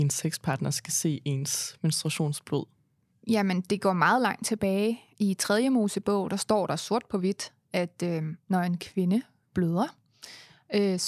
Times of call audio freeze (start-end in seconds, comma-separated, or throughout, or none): none